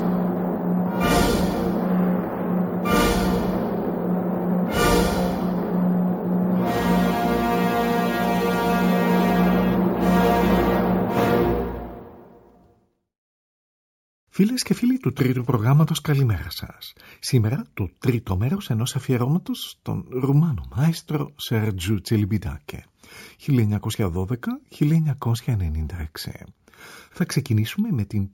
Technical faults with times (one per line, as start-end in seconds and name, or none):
0.00-28.34 imaging from sample-and-hold upsampling